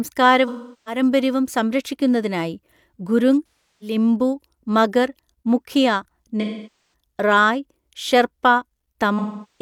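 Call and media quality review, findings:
AAC frame loss with concealment: smeared, noisy, phasey patches at 0.48–1.01 s (before "സംരക്ഷിക്കുന്നതിനായി ഗുരുങ്"), 3.71–3.96 s (after it), 6.41–6.93 s (before "റായ് ഷെർപ്പ") and 9.18 s to the end. The decoder repeats the last good spectrum with scrambled phase. Spectrogram shows blurred, frozen harmonics; the waveform envelope sags. Gaps of about 0.3–0.5 s fit runs of several lost frames.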